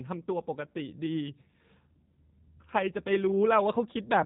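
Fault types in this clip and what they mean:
G.729 codec, throughout: the speech has been squeezed through a low-bitrate VoIP coder that discards the actual waveform and rebuilds each 10 ms frame from a vocal tract filter shape, a pitch predictor and a handful of pulses. Here the damage is plainly audible. Nothing above 3.8 kHz survives, so the sound is muffled and phone-like, and the rebuilt excitation gives it a rough, slightly synthetic edge, which fits a coder running at 8 kbit/s.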